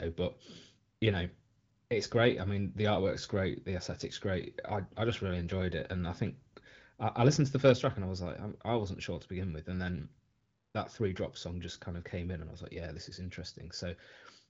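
No technical faults can be heard anywhere in this recording.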